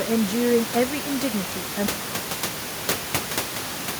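A short speech recording with an audible room noise bed sitting about 9 dB below the voice cuts out abruptly at 1.86 s in an audio dropout to silence that lasts to the end of the clip. The room noise vanishes along with the speech, leaving plain silence: a flat line on the waveform and an empty black region on the spectrogram. This likely comes from a lost input signal while recording continued.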